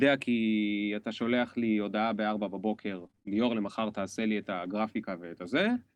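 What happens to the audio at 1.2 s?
At 1.19 to 1.25 s, a lost packet is rebuilt from error correction. About 40 ms of audio fits two dropped packets. The decoder filled them from lower-bitrate copies carried in the following packets, so there is no gap. That stretch just sounds rougher and noisier.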